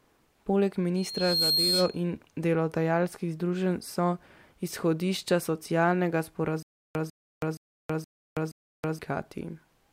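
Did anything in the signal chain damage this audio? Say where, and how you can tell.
Yes. The first fault sits in the analogue acoustic path. From 0.96 s to 2.03 s there is loudspeaker feedback squeal. A single tone at 4.2 kHz rises out of the speech. It builds over about half a second and peaks at roughly 5 dB above it. The microphone was hearing the loudspeaker it fed. At that frequency the loop gain went past one, so the tone kept reinforcing itself until it stopped.

The second fault is a stutter with silent gaps, from 6.63 s to 8.99 s. The same 147 ms fragment of speech plays five times. Each repeat is followed by about 325 ms of dead digital silence, so the burst returns every 472 ms at a steady pace. The speech that belonged in that span never arrives. This likely comes from a stalled playback buffer or stream that replayed its last fragment on each retry, then ran dry.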